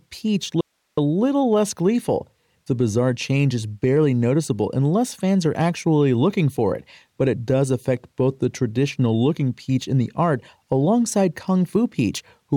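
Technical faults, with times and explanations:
0.61 to 0.97 s, audio dropout to a faint residue: The speech cuts out abruptly for about 0.37 s, then returns on "a little less gleeful". The gap is not silent. It holds only hiss, sitting roughly 50 dB below the speech level. The wanted signal was likely lost upstream while the rest of the chain stayed live, so its own noise floor shows through. The hard edges at both ends set it apart from a natural pause or fade.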